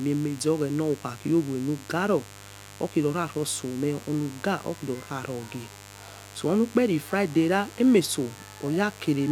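A steady, raspy mains buzz runs under the speech for the whole clip, sitting roughly 20 dB below it: switching spikes from 50 Hz mains leak in, spraying harmonics up into the kilohertz range.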